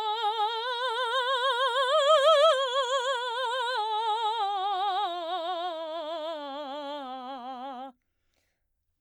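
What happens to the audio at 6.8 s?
Nothing goes wrong at 6.8 s; the music plays through that moment intact, with no dropout, click or distortion.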